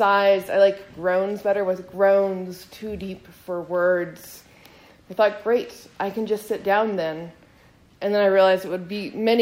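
Nothing in the audio stood out as a technical problem on listening.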